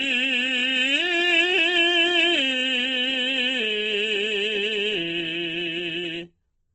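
The whole clip was likely squeezed through Opus compression in its music mode at a very low rate, with a heavy loss of detail that points to something near 12 kbps. With so few bits, the encoder rebuilds many bands by folding lower ones upward or filling them with noise. The music therefore sounds rough and grainy rather than swirly, tones lose their clean edges, and the bandwidth narrows to nothing above 8.1 kHz, dulling the top end throughout.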